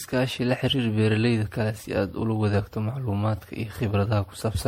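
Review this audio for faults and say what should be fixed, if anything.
Generation loss runs through the whole speech recording: the sound is swirly, hollow and smeared, with consonant attacks blurred well beyond what a single lossy pass would leave. This is likely repeated lossy re-encoding, around ten passes of something that fits a 64 kbit/s MP3. Each pass requantises on a shifted frame grid, so noise and holes accumulate. A spectrogram shows nothing above 16.5 kHz, patchy flickering gaps between harmonics, and smeared onsets. Keep a lossless master and encode to a lossy format only once, at the final delivery step.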